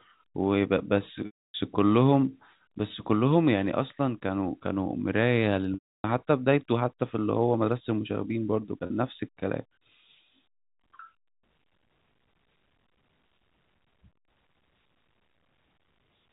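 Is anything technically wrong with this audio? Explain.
Yes. At 1.26 to 1.54 s and 5.74 to 6.04 s the speech briefly turns into a held, buzzy tone that fades to silence before the talker returns; at 8.86 to 8.90 s there is only a short buzzy catch. This is packet loss with pitch repetition: about 280 ms, 300 ms and 40 ms of audio went missing, which fits lost 20 ms packets, and the receiver looped the last pitch period to fill each gap, fading it out over roughly 50 ms when the gap ran long. The G.711 telephone coding limits the band to below 4 kHz.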